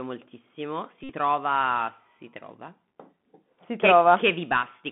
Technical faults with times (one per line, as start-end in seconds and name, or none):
0.00-4.91 Bluetooth CVSD headset codec
1.03-1.12 Bluetooth headset packet repeated